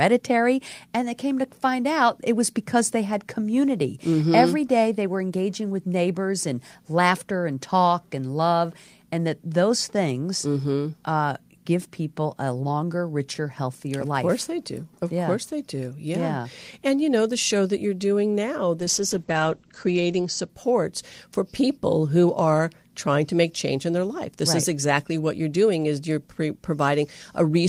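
Just after "that you're doing now", from 18.8 s to 20.55 s, a call bitrate drop turns the speech rough and muffled, consistent with the encoder being squeezed from 32 to 11 kbps. A spectrogram shows everything above 8 kHz vanishing for about 1.5 s.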